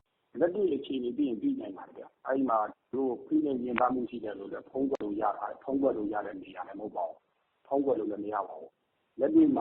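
From 3.53 s to 7.53 s the sound shifts abruptly into a four-second stretch of an adaptive stream at a lower bitrate: the player switched to a thinner encoding, which fits a step down from roughly 64 to 12 kbit/s Opus. Codec artefacts rise, then full quality returns just as suddenly. Unlike a dropout or packet loss, there is no silence or stutter at either boundary.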